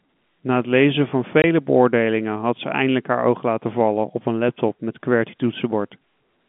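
At 1.42 to 1.44 s there's a short dropout, packet loss filled with silence. About 20 ms of the speech just vanishes, which fits a single lost packet. The receiver had nothing to play, so it put in dead silence instead of smoothing over the gap. The signal stops and restarts abruptly, leaving a tiny hole. Through the narrow, telephone-band G.711 sound it comes across as a brief gap.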